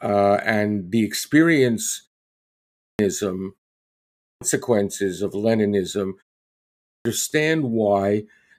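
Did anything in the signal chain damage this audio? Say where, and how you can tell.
Yes. A clipped start after a pause at playback: after "and the experience" (2.38 s), and at 3.87 and 6.51 s, about 0.5–0.6 s of speech is swallowed, unlike muted pauses, which lose none.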